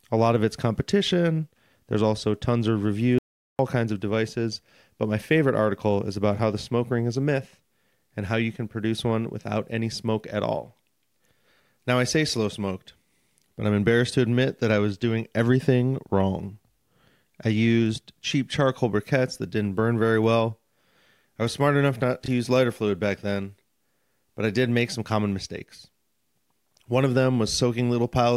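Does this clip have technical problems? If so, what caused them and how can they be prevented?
Yes. After "also tons of", an audio dropout to silence runs from 3.18 to 3.59 s: about 0.41 s of silence, likely from a lost input or brief mute. The waveform flatlines, and the spectrogram shows a blank band with no room tone. Monitoring the input link and mute state prevents this.

Chunks out of order occur from 22.24 to 22.28 s, after "was smart enough not": a 20 ms chunk plays one chunk late, creating three hard joins heard as a jumbled moment. Sequence-numbered buffering that reorders chunks before writing prevents this.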